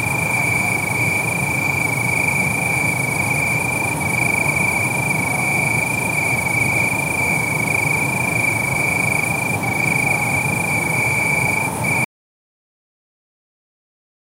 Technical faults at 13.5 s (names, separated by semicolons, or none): audio dropout to silence